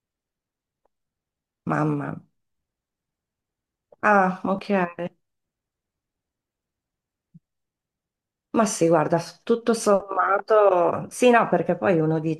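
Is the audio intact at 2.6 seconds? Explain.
Yes, the audio is intact at 2.6 seconds, with no fault present at that moment.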